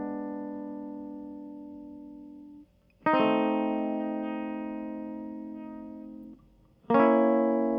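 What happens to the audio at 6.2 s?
A short, harsh blip cuts through the music from 6.21 to 6.24 s. It is damaged data in the compressed stream: corrupted bytes make the decoder misread those frames and lose sync, and it emits garbled output until it locks onto the next valid frame header.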